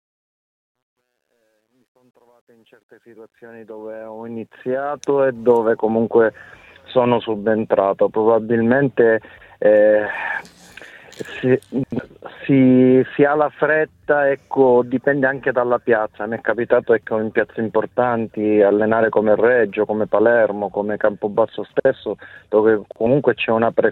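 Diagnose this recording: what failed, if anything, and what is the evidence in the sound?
The fade-in at the start shows truncation distortion, a sample-format or gain-stage fault in which the fade was computed at low word length without dither. From 0.00 to 5.45 s the rising level is gritty, and from 0.00 to 3.33 s it is at its worst. The effective resolution fits about 11 bits. On the waveform the quiet start looks like coarse square steps. On a spectrogram it shows as broadband hash instead of a smooth rise.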